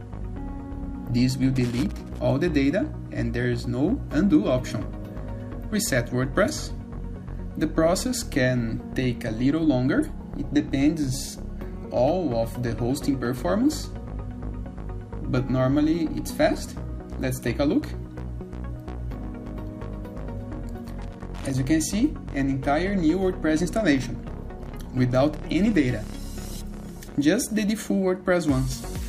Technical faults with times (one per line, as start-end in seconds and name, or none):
1.56-2.19 loose connector crackle
21.02-21.54 loose connector crackle